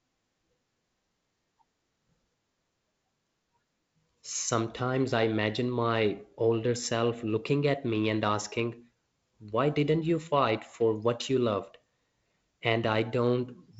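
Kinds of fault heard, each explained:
Nothing here counts as a fault: the speech comes over a G.722 wideband phone link at 48 kbit/s, with the usual top end stopping around 7.7 kHz and only a light trace of the coding.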